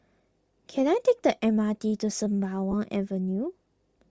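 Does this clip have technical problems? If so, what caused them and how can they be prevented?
Yes. Throughout, the speech has a breathy, grainy upper band with plainly audible codec damage. This is likely Bluetooth LC3 compression at a low bitrate, which fits about 32 kbps in 7.5 ms frames. Using a higher LC3 bitrate prevents this.

From 2.71 to 2.74 s there are lost LE Audio frames. The decoder reused the last spectrum with random signs, leaving a brief noisy smear of about 22.5 ms, which fits three lost frames. Keeping the link strong and free of interference prevents this.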